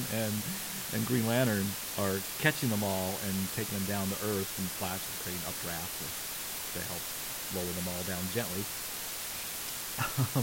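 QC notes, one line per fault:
Throughout, low bit depth with dither: the speech is carried at just 5 bits, and dither added before rounding turns the coarse steps into a steady, even hiss nearly as loud as the speech itself, around 5 dB below it. The hiss stays level through pauses and loud syllables alike, with no gritty, signal-following distortion, which is what separates it from undithered quantisation, where the error would buzz along with the speech and drop out in silences.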